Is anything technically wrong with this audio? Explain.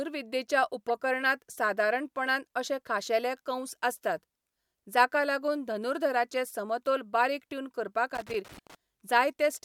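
Yes, two kinds of fault are audible.

Corrupt frame decoded, at 0.88 s and from 8.53 to 8.59 s: damaged bits in a few compressed frames were decoded anyway, spraying energy into the wrong frequencies. The result is a short chirp or blip, about -25 dBFS first and a fainter, about -45 dBFS second. It is frame-length, not a scratchy texture.

Loose connector crackle, from 8.15 to 8.75 s, just after "धनुर्धराचें समतोल बारीक ट्यून": an unstable contact rapidly breaks and remakes the signal path, chopping the audio. This is an irregular, scratchy burst lasting over half a second, unlike the single decoded chirp inside it.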